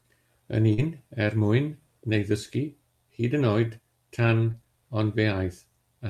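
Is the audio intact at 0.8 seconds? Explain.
No, not quite. At 0.8 s the audio is just coming out of a short concealed packet loss from 0.73 to 0.79 s. About 40 ms of speech arrived too late to decode, so the receiver extended the preceding sound for roughly 41 ms and then crossfaded back into real audio, which is heard as a brief smear. On a spectrogram the harmonics or noise run flat and unchanging through that gap.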